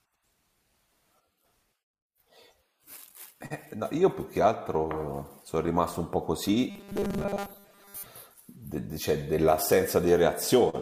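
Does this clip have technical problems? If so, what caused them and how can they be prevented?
Yes. From 6.70 to 8.06 s the playback likely ran short of incoming audio, so the software kept repeating its last short buffer, about 5 ms long, in place of most of the real signal, which was skipped. That is robotic sound from repeated short buffers: the repetition imposes a fixed 200 Hz buzz, and the speech turns rigid and metallic while only loosely tracking its original shape. Preventing it means giving the stream enough buffering and stable delivery so new audio always arrives before the current buffer runs out.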